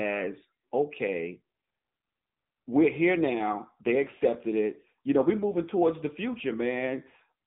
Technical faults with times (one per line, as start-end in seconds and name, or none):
0.00-7.47 AMR narrowband mobile codec